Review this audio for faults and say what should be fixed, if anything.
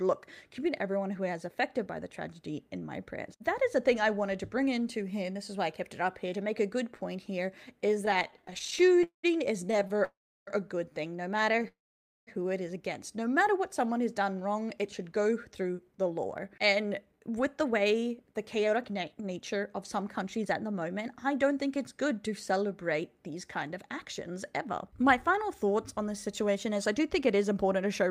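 Repeated stalls (stutter) occur from 8.05 to 10.03 s and again from 11.52 to 11.66 s. Packets arrived late, so the jitter buffer kept running dry. The receiver stretched the last sound through each gap. The first span has 37 stalls totalling 574 ms, with the longest at 200 ms. That is 29% of the span. The second has three brief stalls, the longest 13 ms. Nothing is lost, but the flow drags. A larger or better-adapting jitter buffer on a steadier network path would prevent this.

A call audio freeze follows at 10.05 to 10.49 s, and another at 11.68 to 12.29 s. The sound holds, fades, then goes silent for about 0.34 s and 0.53 s. It then resumes where it stopped. Each adds a gap of 0.42 s and 0.59 s. The likely cause is packets held up in transit, which emptied the buffer. Reducing network congestion or delay spikes on the route would prevent it.

A jitter buffer slow-down runs from 13.59 to 15.04 s. 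The receiver repeated single pitch periods to rebuild its reserve. Playback drops to 93% speed at unchanged pitch. That adds 107 ms and draws sounds out. A buffer target that rises earlier and more gently would avoid this.

A jitter buffer speed-up covers 16.43 to 28.10 s. Delayed packets had piled up, so the receiver trimmed short pitch-period pieces to cut the delay. Playback runs at 106% speed with pitch kept. Roughly 0.7 s is removed in total, so the audio sounds hurried. Smoother packet delivery, or gentler draining of excess buffer, would prevent it.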